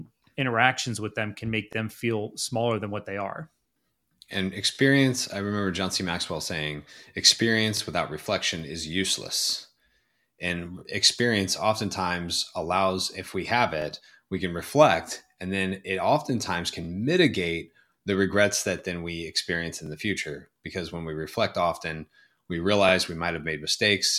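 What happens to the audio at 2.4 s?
Nothing goes wrong at 2.4 s: the speech continues without any dropout, click, distortion or other technical fault at that point.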